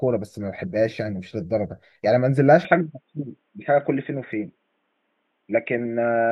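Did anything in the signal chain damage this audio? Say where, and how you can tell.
Yes. From 2.65 s to the end, the speech abruptly loses everything above 3.8 kHz and turns dull and boxy, with no gap and no clear level jump, and a faint new noise floor appears about 50 dB down. This is likely an input switched to a poorer device at the driver stage.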